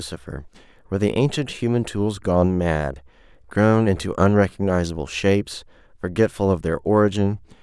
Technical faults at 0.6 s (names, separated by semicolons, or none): none